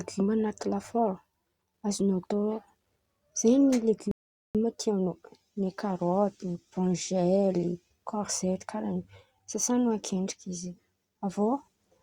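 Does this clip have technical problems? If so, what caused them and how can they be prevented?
Yes. At 4.11 s the speech drops to silence and picks up again at 4.55 s, continuing from exactly the point where it stopped, so nothing is skipped but about 0.43 s is added. This is a rebuffering stall: the player exhausted its downloaded audio and paused playback until more data arrived. To prevent it, keep a larger playback buffer and use adaptive bitrate streaming so delivery keeps pace with playback.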